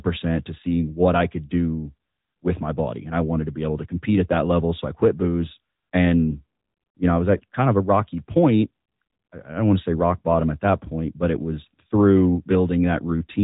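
Throughout the speech, the AMR narrowband mobile codec limits the band to below 3.8 kHz, removing sibilance and air. Its pulse-driven vocal-tract model makes the voice plainly buzzy and synthetic. The damage level fits a high-rate mode around 10.2 kbps.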